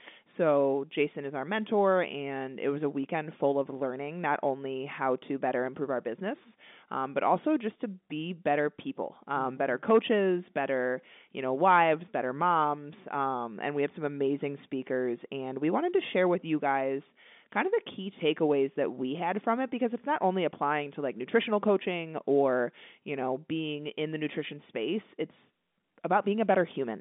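No technical faults can be heard in this speech.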